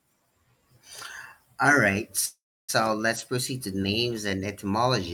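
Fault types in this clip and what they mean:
Call audio freeze: From 2.25 to 2.71 s the speech stalls. The last sound carries on as a fading buzz or hiss, then goes silent for 310 ms. Speech resumes where it stopped, 0.43 s late, with nothing lost. Late packets emptying the jitter buffer are the likely cause.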